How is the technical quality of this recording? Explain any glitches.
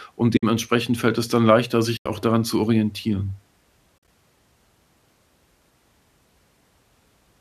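The speech has three brief holes where the sound fades away and returns. The light grain in the speech likely comes from low-delay AAC coding.

These are AAC frame losses with muting, at 0.37 to 0.43 s, 1.97 to 2.06 s and 3.98 to 4.08 s. Compressed frames never reached the decoder, which filled their spectrum with zeros. The overlapping transform windows then tapered the audio down and back up, so each gap is a soft-edged silence. The first gap lasts 60 ms and the second 90 ms, which fits frames of about 10 ms. The third spreads 70 ms of loss over 100 ms, with the longest run about 50 ms.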